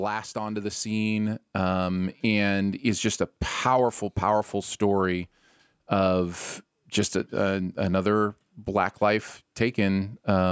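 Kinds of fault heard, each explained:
Automatic gain rising: from 0.33 to 2.88 s the level of the speech climbs steadily by about 7 dB, and the background noise lifts with it, because the automatic gain control judged the incoming signal too quiet and turned its amplification up gradually rather than in one step. The slow, even swell over roughly two and a half seconds is the signature, while the band-limited call microphone processing, with nothing above 8 kHz, stays the same throughout.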